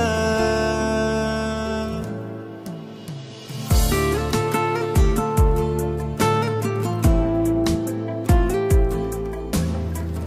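No technical faults can be heard in this clip.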